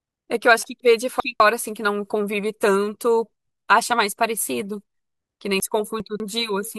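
At 0.8 to 1.4 s and again at 5.6 to 6.2 s, the speech jumbles briefly: chunks out of order. In each 0.6 s span, one 200 ms block arrives two blocks late and plays after the two that should follow it. No audio is lost, but the sequence is scrambled and there are three abrupt joins between mismatched blocks.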